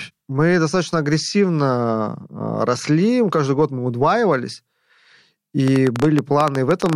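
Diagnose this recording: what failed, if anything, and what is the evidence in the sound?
A train of clicks runs from 5.68 s to 6.94 s, near the end of the speech. About fifteen pulses arrive at roughly 12 per second, unevenly spaced, each of much the same short, sharp shape and peaking about 15 dB above the programme level, so they stand out as popping over the voice. The stage is likely the analogue wiring, with impulsive interference from nearby equipment coupling into the signal path before conversion.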